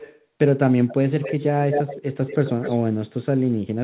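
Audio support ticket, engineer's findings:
Echo leak: far-end echo canceller likely not removing loudspeaker pickup. Delayed copy of the speech at 0.0–0.24, 0.87–0.94, 1.22–1.44, 1.71–2.01 and 2.27–2.79 s. Lag 294 ms at first, then 227 ms. Faint early on, as loud as the speech at 1.71–2.01 s.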